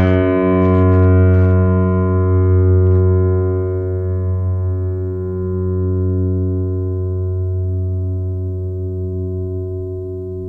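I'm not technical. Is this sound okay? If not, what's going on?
No. Hard clipping shows up three times in this music: from 0.01 to 0.18 seconds, from 0.62 to 1.54 seconds, and from 2.87 to 3.0 seconds. Each time, the sound got louder than the recording chain could carry, so the tops of the waveform were sliced off flat. Those flattened peaks add a rough, gritty edge, strongest at the very start, with a lighter crackle on the loudest moments in the later two stretches.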